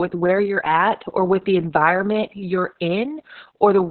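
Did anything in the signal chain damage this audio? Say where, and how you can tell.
Yes, at the codec stage. Throughout, the speech is muffled, hoarse and faintly robotic, with nothing above about 4.4 kHz. This is Opus voice compression running SILK in narrowband, and the heavy coarse coding of the excitation points to a bitrate near 6 kbps.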